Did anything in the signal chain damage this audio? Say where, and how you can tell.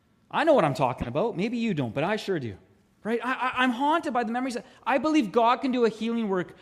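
Yes. A corrupt frame was decoded at 1.01 to 1.08 s, just after "I know what I'm". It is heard as a brief chirpy burst peaking around -15 dBFS, in the codec stage. Damaged bits across a few compressed frames were played anyway, so misread gains and codes put energy at wrong frequencies.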